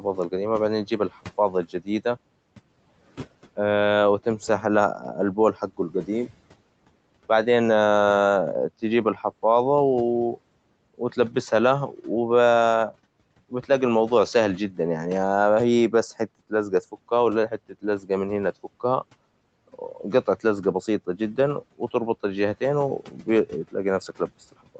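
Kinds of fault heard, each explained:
Speech cut by the noise suppressor: Parts of the speech dip and sound swallowed, by up to about 18 dB, around 0.31–1.88, 4.99–6.31, 10.35–12.05 s and through 15.91 s to the end. The suppressor mistook these softer speech moments for background noise and turned them down along with the room noise.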